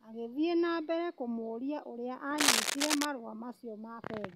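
A worn cable or connector was likely being moved, its contact resistance jumping erratically, so from 2.38 to 3.05 s, just after "na mbere kũmũria ũria", cable scratch noise lays dense, uneven scratching and rustling bursts over the speech, somewhat louder than the speech itself.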